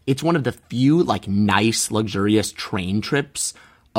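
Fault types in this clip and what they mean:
Nothing to flag here; the speech comes through without any technical faults.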